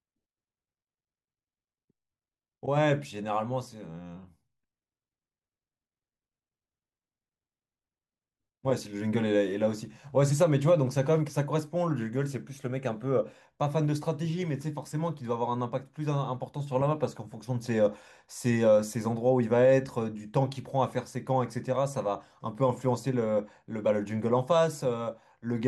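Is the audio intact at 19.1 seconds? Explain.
Yes, at 19.1 seconds the speech plays through intact, with no audible dropout, click, distortion or other fault at that moment.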